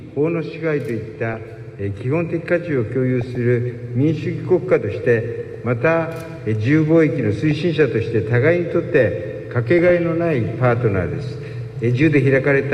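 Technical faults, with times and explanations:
1.09–1.39 s, 3.21–3.36 s, 5.47–5.65 s, 7.51–7.58 s and 9.79–9.99 s: DAB burbling. Weak reception let residual bit errors, at a fraction of a percent, corrupt MP2 samples and scale factors, so individual sub-bands jump in level frame by frame, giving short blips of noise over the sound.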